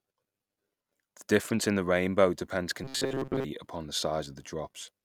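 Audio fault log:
2.84–3.45 s, robotic sound from repeated short buffers: after "in the rainbow depends", a rigid 134 Hz buzz, likely from about 7.5 ms of audio replayed; the spectrogram shows flat, evenly spaced harmonics.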